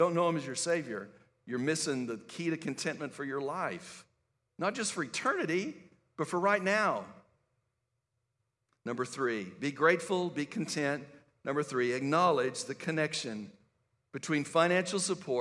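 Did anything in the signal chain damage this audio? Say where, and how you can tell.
Yes, at the sample-rate conversion stage. From 0.0 to 1.5 s the speech carries regular ticks at 20 Hz, present only with signal: a resampler restarted on every block. Converting 48 kHz to 24 kHz in separate 50 ms blocks leaves each block edge without its true neighbouring samples.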